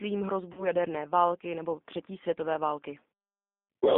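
From start to finish you can hear the G.729 codec at work. The line is squeezed into roughly 200 Hz to 3.6 kHz, so the speech is thin and has no top end. The codec doesn't send the waveform itself. It rebuilds each 10 ms frame from a vocal tract filter, a pitch predictor and a few pulses, and at what sounds like 8 kbit/s that leaves a plainly audible rough, slightly synthetic edge on everything.

Then at 0.53 s there's a VoIP packet loss that the speech codec conceals. About 40 ms of audio goes missing, which fits two 20 ms packets. The decoder fills the gap by stretching its last pitch and filter and fading them down, so you hear a brief buzzy, smeared tone or coloured noise instead of real speech. Each frame is built on the one before it, so the sound stays weak and a bit distorted until about 0.66 s.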